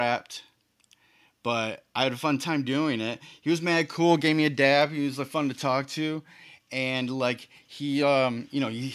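No technical faults can be heard anywhere in the recording.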